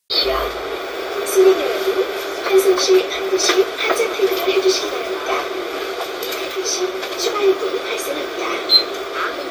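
Nothing stood out as a technical fault on listening to these sounds.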